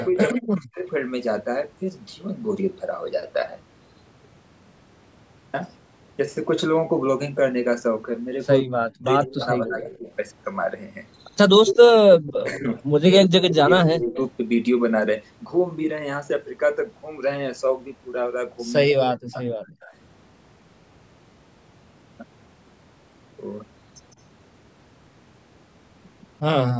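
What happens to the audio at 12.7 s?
A delayed copy of the speech trails about 160 ms behind from 11.66 to 14.23 s, about 10 dB down. This is an echo leak, likely from a loudspeaker echo canceller letting residue back. Between 11.97 and 14.18 s the main speech also dips by up to about 20 dB in pieces, adding up to under a second. This is speech suppressed in double talk, likely as the canceller turns everything down while both sides talk.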